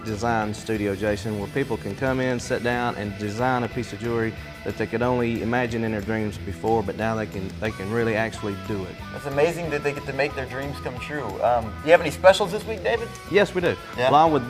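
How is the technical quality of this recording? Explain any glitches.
No glitches or technical faults can be heard here.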